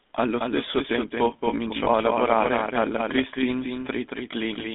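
Throughout, the speech carries the GSM full-rate codec's buzzy, gravelly roughness, which fits a 13 kbps full-rate GSM line. Nothing survives below 200 Hz or above 3.6 kHz, so a spectrogram shows a hard-edged band with empty space above and below it.

Also running the whole way is a doubled audio track. A second full-band copy trails the original by about a fifth of a second, a few dB quieter and with no reverberant tail. It is likely a second capture through a slower path. On a waveform, every syllable onset reappears as a smaller twin at that fixed offset.

Between 1.84 and 1.88 s, after "stesso tempo" and before "a lavorare alla", lost GSM frames produce a brief metallic ring. The codec repeats the last good frame's settings for the single lost frame. A spectrogram shows a short, smeared, static stripe where speech detail should change.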